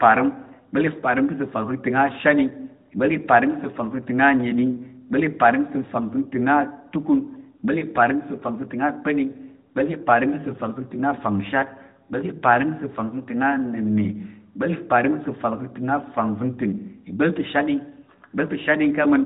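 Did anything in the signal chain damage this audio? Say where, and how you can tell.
No, nothing in the chain damaged this speech.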